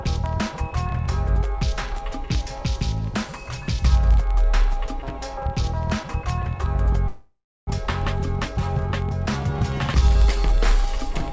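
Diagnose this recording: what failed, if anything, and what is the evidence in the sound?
An unlocked digital input, off by roughly 700 ppm, slips one sample about every 30 ms, causing sharp word clock ticks from 0.13 s to 11.33 s.

Network delay likely emptied the jitter buffer, causing a call audio freeze from 7.08 to 7.69 s: a fading fill, 0.3 s silence, then resumption, nothing lost.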